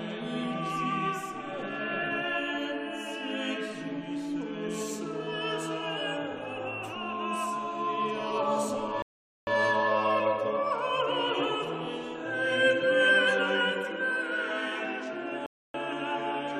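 Two rebuffering stalls interrupt the audio. At 9.02 s the sound drops to silence for about 0.45 s, then picks up at exactly the point where it stopped; at 15.46 s the same thing happens for about 0.28 s. Both gaps add time rather than removing any material, which is the signature of a player that exhausted its downloaded buffer and paused playback until more data arrived.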